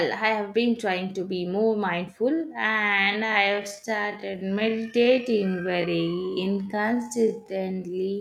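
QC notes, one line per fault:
2.30 to 8.20 s, time-stretched section: after "trying to be more" the pace abruptly drops to about 0.61 times normal while pitch holds steady. Short pieces are repeated to fill the time, so the speech drags. Likely a software stretch to fit a length.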